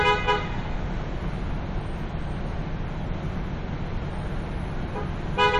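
No technical faults can be heard anywhere in the audio.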